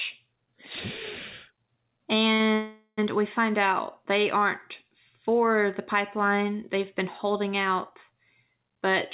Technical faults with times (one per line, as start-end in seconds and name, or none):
2.34-2.41 short stall from a late packet
2.54-2.99 call audio freeze